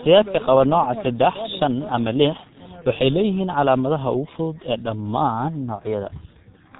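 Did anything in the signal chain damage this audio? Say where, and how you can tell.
Yes. The damage comes from the codec stage: the speech has gone through a G.723.1 codec, heavily, for the whole clip. Nothing reaches above about 3.8 kHz, so the speech is muffled, and consonants smear into a hoarse, buzzy texture, which fits a rate around 6 kbit/s. A plain low-pass filter would dull the top end but leave consonants crisp. Here the coder rebuilds the voice from a model refreshed only every 30 ms, so fast detail is lost.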